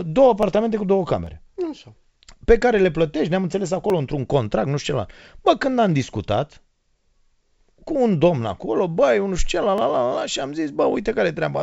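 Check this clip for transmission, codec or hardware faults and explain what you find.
Four short clicks turn up in this speech, at 0.43, 1.27, 3.9 and 9.78 s. All of them are dropped samples. Each one is likely a tiny gap, under a millisecond, so the waveform jumps straight to a later value and you hear one sharp tick. No speech goes missing. The call path's wideband coding, with nothing above 8 kHz, fits G.722.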